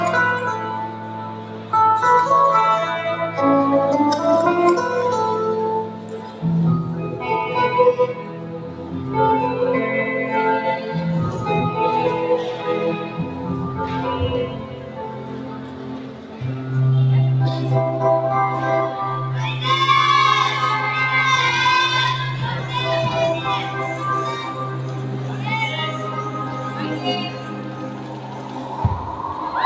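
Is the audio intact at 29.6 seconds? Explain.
No. At 29.6 s a speech-tuned noise suppressor, active for the whole clip, is treating steady sound and tails as noise, so held parts sink by around 10 dB and pump.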